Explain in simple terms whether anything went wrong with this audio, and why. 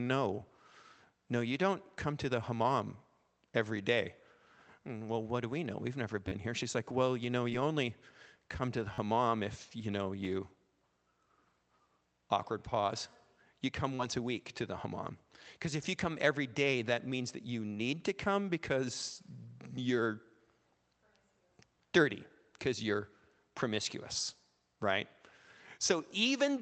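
A few hiccups. There's a repeated buffer at 6.28 to 6.32 s, at 8.94 to 8.98 s (between "only come to the" and "if you know") and at 10.25 s. Fresh audio arrived late, so the same 10.7 ms slice, which fits a 512-sample buffer, replayed back to back. You hear a quick stutter or buzz.

There's also short concealed packet loss at 7.49 to 7.53 s (between "like well you know" and "only come to the") and at 13.95 to 14.01 s. About 20 and 40 ms of audio went missing on this call path. The receiver filled each gap by extending the preceding sound, which leaves a brief smear.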